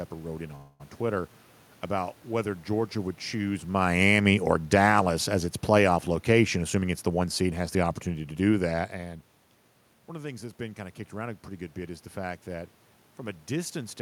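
Right after "wrote in", at 0.55 s, the speech stalls into a fading buzz or hiss that lasts about 0.24 s until 0.82 s, then picks up exactly where it stopped, so nothing is lost but a gap is inserted. This is a call audio freeze, likely from packets held up in transit so the jitter buffer ran dry and the receiver stretched the last sound until delivery resumed, adding about 244 ms of delay. After "would choose", from 3.86 s to 8.85 s, the level sinks steadily by about 7 dB, and the room noise beneath the speech drops with it, which marks this as automatic gain falling rather than the talker shifting position, a genuine change that can be heard separately around 3.5 s and 9 s. The gain control judged the input too loud, or its background noise too strong, and eased its gain down over those five seconds. Overlapping that, between 6.56 s and 8.43 s, the speech runs hurried at about 110% speed while its pitch stays put. 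That is a jitter buffer speed-up: the buffer had built up more audio than its target, so the receiver trimmed many short slices of one or a few pitch periods each, around a fifth of a second in total, to pull the delay back down.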